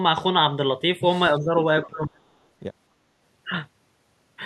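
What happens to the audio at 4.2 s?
At 4.2 s the audio is intact, with no dropout, click, distortion or other fault at that point.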